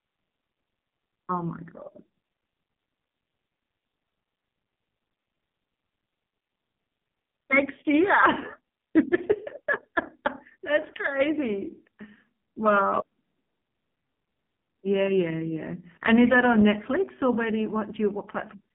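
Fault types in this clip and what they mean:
AMR narrowband mobile codec: the mobile speech coder cuts everything above 3.6 kHz; a heavy buzzy, synthetic colouring throughout points to a very low mode near 5 kbps.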